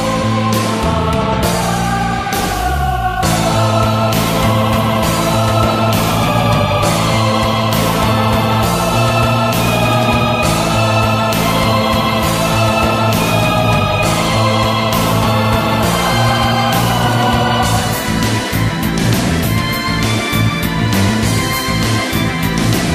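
The signal carries no technical faults that can be heard, with nothing in it pointing to a problem in the recording or transmission chain.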